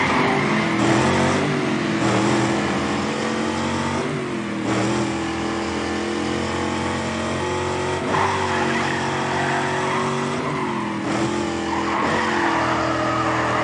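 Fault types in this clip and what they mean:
No technical faults can be heard anywhere in it.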